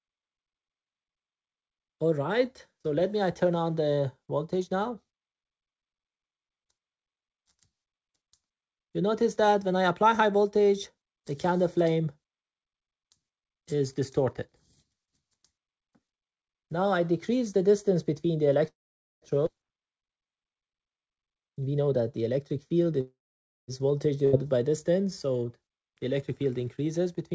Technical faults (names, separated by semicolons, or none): call audio freeze; skip ahead; jitter buffer speed-up